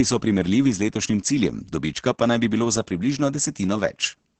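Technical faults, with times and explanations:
Throughout, Opus voice compression: the speech sounds muffled, hoarse and faintly robotic, with heavy codec damage and nothing above 8.6 kHz. The codec's SILK linear-prediction mode has limited the audio to wideband, and the excitation that drives each voiced sound is coded coarsely. Damage this heavy fits a bitrate around 10 kbps.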